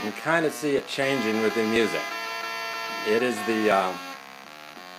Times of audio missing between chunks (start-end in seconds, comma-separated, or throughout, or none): 0.78, 1.76, 2.74, 3.72, 4.69